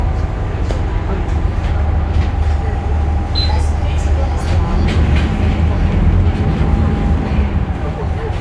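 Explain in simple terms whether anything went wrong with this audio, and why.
Nothing went wrong with this recording of sounds. No glitches, dropouts or other technical problems can be heard anywhere in it.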